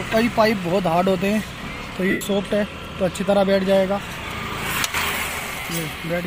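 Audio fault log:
2.10–2.21 s and 5.60–5.65 s, lost LE Audio frames: Bluetooth frames went missing for about 105 ms, then again for about 45 ms, which fits 7.5 ms LC3 frames. The decoder filled each hole by replaying the last good spectrum with random signs, so tones dissolve into a hissy smear instead of dropping out cleanly. In the longer gap it lets that copy fade after the first few frames, so the smear sags in level before the sound returns.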